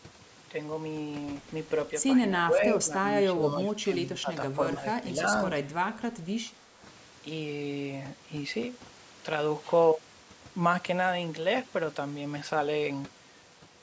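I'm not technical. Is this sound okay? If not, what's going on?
No. Two things are wrong with it.

The first is overdone noise removal, and it runs through the whole clip. A noise-cleaning tool was set too strong. It switched off parts of the sound it took for hiss, and quiet parts of the speech went with them. The background drops away but sparkles with small twinkling specks.

The second is speech suppressed in double talk. The voice dips from 2.37 to 3.02 seconds, then again from 3.33 to 5.19 seconds. That second stretch is the longest and deepest, with about a second of it affected. A brief dip follows from 6.45 to 6.51 seconds. This is likely a call's echo control getting confused when both people talked at once, so it turned this voice down too.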